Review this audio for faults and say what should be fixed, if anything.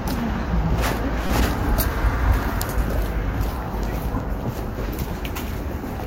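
A corrupt frame decoded from 1.27 to 1.30 s produces a short chirp, blip or burst of noise. Flipped bits in one compressed frame gave the decoder wrong gains or codes, putting misplaced energy peaking near -10 dBFS. Add checksum verification so damaged frames are concealed rather than decoded.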